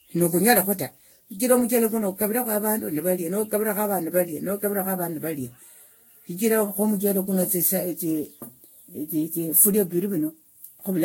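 Throughout the speech, the audio was likely decoded and re-encoded about ten times through a lossy codec, which fits Vorbis near 62 kbit/s. This generation loss piles up quantisation noise and spectral holes, leaving a swirly, hollow sound with smeared consonant attacks and nothing above 16.6 kHz.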